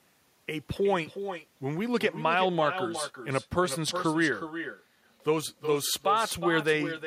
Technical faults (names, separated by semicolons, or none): echo with no canceller